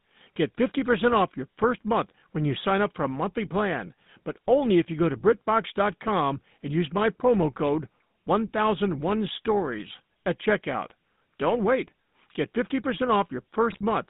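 The whole clip runs through a GSM full-rate codec, band-limited to roughly 150 Hz to 3.7 kHz, with an obviously buzzy, gravelly roughness from its sparse pulse excitation. Right at the end, from 13.70 to 13.81 s, GSM bit errors corrupt the decoder's speech parameters, so the speech breaks into a brief squawky, gargling burst.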